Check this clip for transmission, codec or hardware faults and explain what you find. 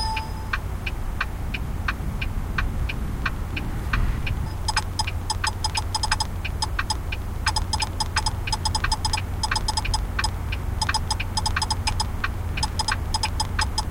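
One hardware-type fault is present. A train of clicks runs from 2.80 s to 13.79 s: a regular ticking at 7.01 clicks per second, around seventy in all, peaking roughly as loud as the sound itself. The likely cause is electrical interference or a struggling interface repeatedly injecting identical pulses.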